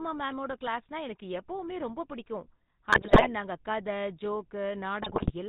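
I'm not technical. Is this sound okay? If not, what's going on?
No. The GSM full-rate codec, an old mobile-phone speech format, affects the whole clip. It rebuilds the voice from a rough model driven by regular pulses and drops everything above 4 kHz, so speech sounds muffled, buzzy and gravelly.

GSM bit errors occur from 2.92 to 3.27 s, right after "எனக்கு எப்பவுமே ரொம்ப பிடிக்கும்" and before "நாங்க கதை", and again from 5.02 to 5.32 s. Corrupted data reached the decoder, briefly distorting the sound into squawks, pops and gargling.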